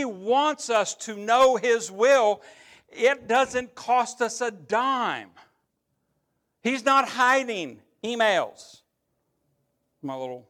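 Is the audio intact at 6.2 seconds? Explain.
Yes, the audio is intact at 6.2 seconds, with the speech running through that moment without any dropout, click, distortion or other technical fault.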